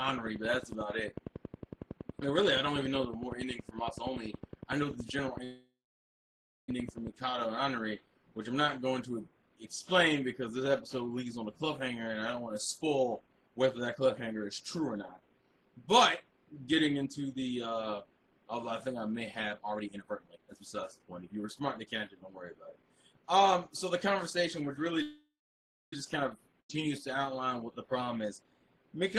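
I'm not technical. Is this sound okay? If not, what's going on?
No, there are a few problems, all of the kind you get on an internet call when the connection hiccups.

At 5.44 s and again at 25.02 s you hear a call audio freeze. The sound stalls, trails off as a fading buzz, then goes quiet. The first lasts about 1.2 seconds and the second about 0.9 seconds. The likely cause is that pieces of the audio were held up on their way. The receiver filled the wait with a fading copy of the last sound. When the audio arrived, it picked up where it had stopped. So nothing is lost, but a pause is added.

From 12.38 s to 22.44 s there is a jitter buffer speed-up. The sound plays about 12% faster but keeps its normal pitch, so it feels rushed. The receiver had built up too much waiting audio. It trimmed many tiny slivers to catch up, roughly a second and a half in total. A much shorter burst, about 10% faster, happens from 28.16 s to 28.55 s.

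At 26.60 s there is a skip ahead. Playback jumps forward with almost no gap. About a fifth of a second of sound is simply missing, and the two sides are stitched together.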